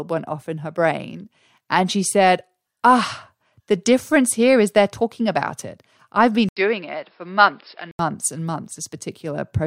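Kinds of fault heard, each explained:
Input switched to a poorer device: from 6.49 s to 7.99 s the speech turns dull, losing everything above 5.3 kHz, with fresh background noise about 40 dB down and an 80 ms gap at the switch, while loudness stays level. This is likely a change to a narrower-band microphone or headset profile.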